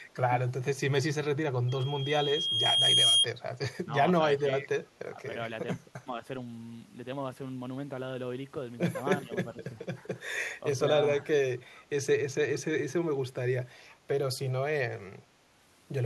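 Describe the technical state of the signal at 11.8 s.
At 11.76 to 11.84 s there is an echo leak. A faint copy of the speech returns about 0.41 s late, far below the main level. The likely cause is a far-end loudspeaker whose echo canceller let some of its microphone pickup through.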